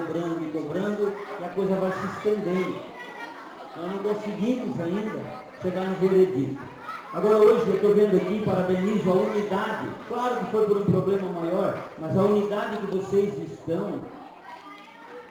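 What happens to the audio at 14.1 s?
At 14.1 s, as throughout the clip, a gritty, inharmonic fizz rides on louder and brighter sound from crude rate conversion. Samples are repeated without filtering, consistent with a 44.1 kHz to 48 kHz change, leaving error tones roughly 35 dB down.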